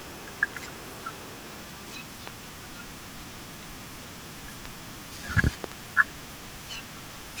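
Loud pops land at 2.27 to 2.30 s, 4.65 to 4.68 s, and as a stronger double pop at 5.64 to 5.74 s, each thumping well above the speech. A likely voltage pulse is added, so unlike a dropout, the speech continues unbroken underneath.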